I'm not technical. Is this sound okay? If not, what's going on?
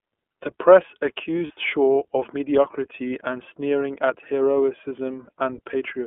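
No. iLBC codec, throughout: this speech went through a phone-style compressor that keeps only the middle of the sound range, so it sounds narrow, slightly rough and synthetic.

Lost iLBC frames, at 1.47 s and 5.25 s: each time a tiny piece of about 30 ms went missing. The decoder covered it by repeating the last bit of sound, causing a brief buzzy hold before normal speech resumes.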